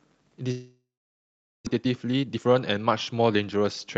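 From 0.51 s to 1.69 s the speech stops, in a pattern that points to a likely long network dropout. The receiver first stretches the last sound into a fading buzz or hiss. Roughly 0.79 s of that gap ends up as silence or a low steady floor. When audio resumes, about 0.64 s of the original is simply gone, and the playout is now running around half a second behind where it was.

From 1.70 s to 3.84 s the jitter buffer speed-up is working off that backlog. The receiver repeatedly cuts out short segments a pitch period or so long, so the speech plays at about 123% of normal rate with its pitch unchanged. The result sounds hurried. Roughly half a second is removed in total, which brings the delay back down. Through the Opus call path the audio is band-limited to 8 kHz.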